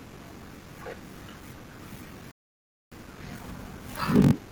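From the start, the speech carries a steady buzz at about 47 Hz. This is a block size mismatch, padded type. One stage hands over shorter blocks than the next stage reads, and zeros fill the rest of each block. A tiny gap repeats every block, which fits a 1024-sample read size. The gaps slow the speech to 0.861 times normal speed, yet the timbre stays about where it should be.

At 2.31 s the sound drops to silence, and at 2.92 s it picks up exactly where it left off. This is a rebuffering stall. The player ran out of downloaded audio and waited for more to arrive. Nothing is skipped or repeated. The pause simply inserts dead air, adding 522 ms to the clip's running time.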